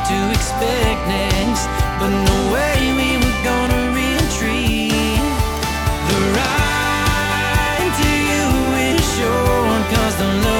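Word clock ticks run from 0.24 s to 10.52 s, around fifty sharp clicks spaced about a fifth of a second apart. The receiving device isn't locked to the sender's clock, which points to a mismatch near 100 ppm, so each clock slip drops or repeats a single sample.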